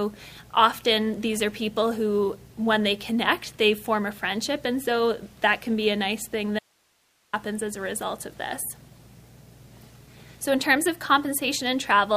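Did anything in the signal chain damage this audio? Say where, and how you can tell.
Yes. An audio dropout to a faint residue runs from 6.59 to 7.33 s. The sound cuts off abruptly for 741 ms, leaving only hiss roughly 40 dB below the signal, then resumes mid-flow. The cause is likely an intermittent analogue connection ahead of a preamp that stayed live.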